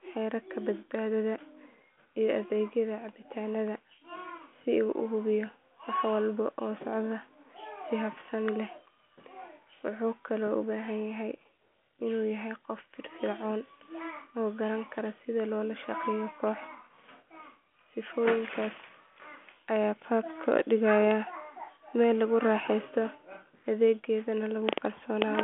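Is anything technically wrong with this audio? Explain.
No, nothing stood out as wrong on listening to this speech.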